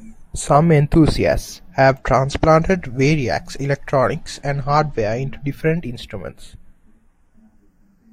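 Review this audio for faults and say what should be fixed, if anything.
Channels drifting apart throughout this speech clip: the two sides run on clocks roughly 30 ppm apart, so their offset creeps to about 0.15 ms, sweeping comb notches as slow flanging in mono. Prevent it by clocking both capture devices from one shared word clock.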